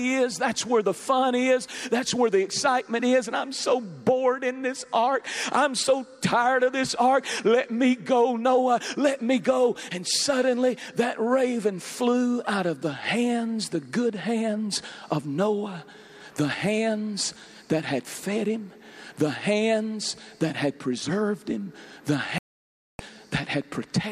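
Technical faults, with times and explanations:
22.38–23.00 s, digital broadcast dropout: the receiver muted on failed frames, losing 0.61 s of sound. The waveform shows a flat gap and the spectrogram a blank band.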